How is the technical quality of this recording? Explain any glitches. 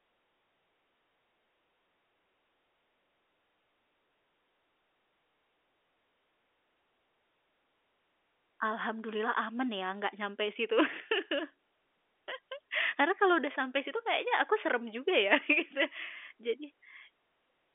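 One short glitch occurs in this telephone-band speech, which is carried over G.711 A-law coding with a line limited to about 300 Hz to 3.5 kHz.

From 13.52 to 13.54 s, between "kalau sudah" and "situ kayaknya aku serem", the sound briefly holds with a buzz. This is packet loss with pitch repetition: a lost 20 ms packet was bridged by repeating the last pitch period.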